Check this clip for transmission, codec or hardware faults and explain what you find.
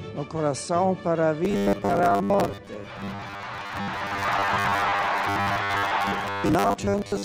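One fault is present: robotic sound from repeated short buffers. It starts at 1.45 s and runs to the end of the clip. From there the audio turns into a rigid, metallic buzz pitched at 100 Hz. It still loosely traces the original sound's shape. The likely cause is fresh audio arriving too seldom. The player fills each gap by replaying a fragment about 10 ms long. That repetition rate sets the fixed 100 Hz pitch. Roughly half of the material is repeats rather than new audio.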